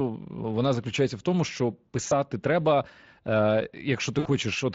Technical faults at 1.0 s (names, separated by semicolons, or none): none